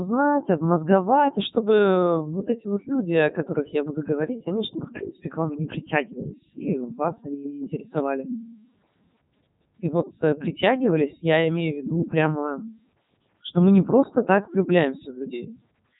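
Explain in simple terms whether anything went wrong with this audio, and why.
The speech passed through a Codec 2 vocoder for the whole clip. It keeps only rough pitch, loudness and tone shape, then rebuilds the voice from steady tones, so it sounds robotic and buzzy, with heavy damage and nothing above 3.8 kHz.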